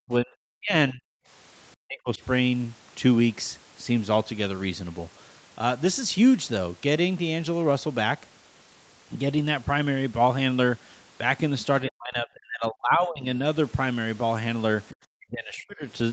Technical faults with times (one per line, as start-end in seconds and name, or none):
0.07-1.06 speech suppressed in double talk
1.81-2.21 speech suppressed in double talk
11.85-13.31 speech suppressed in double talk
14.88-14.96 other side's voice leaking through
15.15-15.86 speech suppressed in double talk